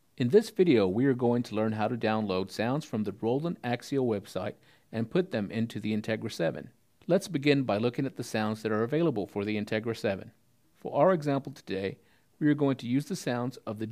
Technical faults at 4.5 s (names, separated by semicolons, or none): none